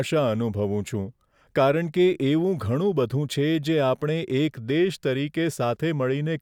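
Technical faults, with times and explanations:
No technical faults detected.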